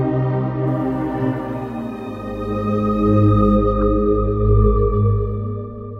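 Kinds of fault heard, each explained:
Low bit depth without dither: the signal was likely rounded to about 9 bits with no dither, so quieter passages turn grainy, with distortion tracking the sound roughly 45 dB down.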